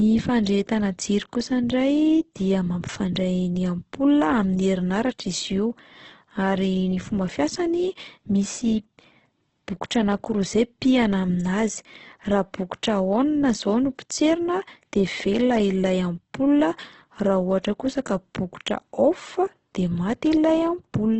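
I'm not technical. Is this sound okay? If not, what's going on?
No. For the whole clip, the speech sounds rough and grainy, with a noisy, gritty edge. Nothing can be heard above about 8.2 kHz, so it also sounds a little dull. This is likely Opus compression, squeezed very hard. When the file is made that small, fine detail is dropped and partly filled in with noise. That creates the grainy texture instead of clean, clear sound.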